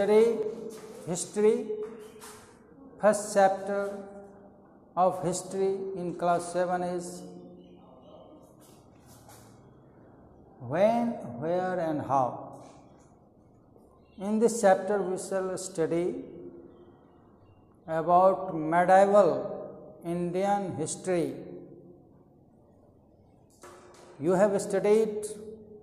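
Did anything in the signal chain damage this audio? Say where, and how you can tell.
No, nothing along the chain from capture to playback leaves an audible mark on this signal, with level, continuity and frequency balance holding steady throughout.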